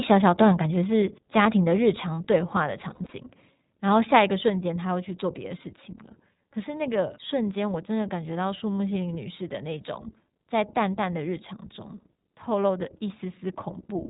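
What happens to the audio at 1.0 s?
At 1.02 s the call software likely stepped the microphone volume down, lowering the device's input gain in a single move. Speech and background drop together by about 2 dB at that instant, a small sudden step in level rather than a smooth fade.

At this moment, as throughout the clip, the speech passes through the iLBC codec at 15.2 kbps, which codes each 20 ms frame independently. Nothing above 4 kHz gets through, and the codec damage is plainly audible as a narrow, slightly rough, synthetic tone.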